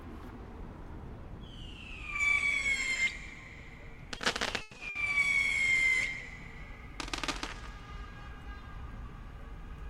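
At 4.17 s, a short concealed packet loss occurs. About 20 ms of audio arrived too late, and the receiver patched the gap by extending the preceding sound. It is heard as a brief smear or wobble.

A burst of packet loss follows from 4.61 to 4.75 s. About 120 ms is lost. The receiver holds the last sound and fades it, producing a buzz or hiss before the audio resumes further on. The short concealed loss happens again at 4.77 s. A shorter burst from 4.89 to 4.97 s drops about 60 ms.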